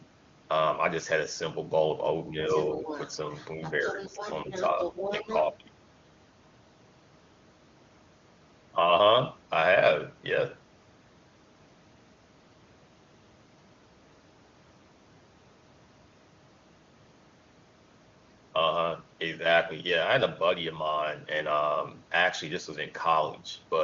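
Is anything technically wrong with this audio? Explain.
Yes. The clip has two echo-related faults near its start. Both are likely the work of an echo canceller struggling with loudspeaker echo.

Speech suppressed in double talk occurs three times: 2.3 to 2.5 s, 3.56 to 4.78 s, and 5.19 to 5.25 s. The talker's level sinks by around 5 dB at its deepest. The dips are brief and shallow, not full cutouts. The likely cause is the canceller failing to tell the near talker from loudspeaker echo. So it turned both down together.

The other side's voice is leaking through from 2.49 to 5.46 s. A second voice sits about 10 dB below the main talker. It overlaps the suppression dips. This is likely loudspeaker output reaching the microphone and not fully cancelled. It sounds like a fainter talker in the background. The wideband codec sounds clean, which fits a high AMR-WB rate.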